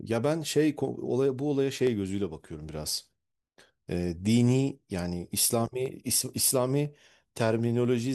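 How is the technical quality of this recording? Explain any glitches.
The recording has one recurring fault: clock drift buffer slips. The likely cause is two devices each running on their own clock, mismatched by roughly 300 parts per million, so the buffer between them drifts until a small block of samples, around 15, is dropped or repeated. In this speech clip that produces about seven regular clicks, one roughly every second (period 1.00 s), from 0.88 s to 7.85 s.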